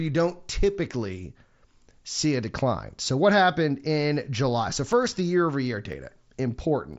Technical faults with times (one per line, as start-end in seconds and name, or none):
4.92-6.94 periodic USB or driver dropouts